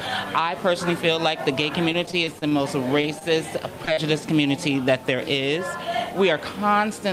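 From 1.89 to 2.53 s the sound turns choppy, with small pieces dropping out. This is repeated packet loss. Seven separate gaps, none longer than 29 ms, occurred within this stretch. Each was patched by continuing the last sound, so 117 ms, about 18% of the span, is synthetic fill and 40 ms of real audio is missing.

At 3.01 to 3.05 s there is a brief smear where about 20 ms of audio simply isn't there. This is short concealed packet loss: the data never reached the decoder in time, so the receiver extended the preceding sound for 20 ms and then blended back into the real signal.

At 3.19 to 3.23 s a sound is held slightly too long, with a slight buzz or dip. Nothing is lost. This is a short stall from a late packet. The jitter buffer ran dry, so the receiver stretched the last sound by about 19 ms until the packet arrived, then carried on from the same point, shifting the playout delay by that amount.

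Two more short concealed packet losses follow close together. At 3.85 to 3.89 s about 20 ms goes missing. At 3.93 to 3.99 s about 40 ms goes missing and is filled with continued sound, which gives a wobble where short sounds can disappear.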